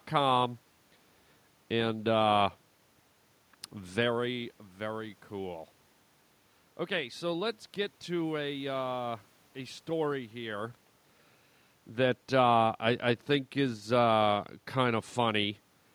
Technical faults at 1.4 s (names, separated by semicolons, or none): none